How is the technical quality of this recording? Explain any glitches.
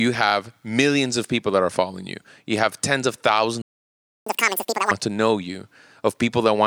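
The recording has two linked glitches in the middle of the speech.

Playback stall from 3.62 to 4.26 s: the player likely ran short of data or was blocked, so the audio cuts to silence for 0.65 s right after "you have tens of".

Catch-up at higher speed from 4.26 to 4.91 s: the player resamples its backlog at 2.0 times speed to regain lost time, so the speech rushes and jumps about ten semitones higher before returning to normal at "to know".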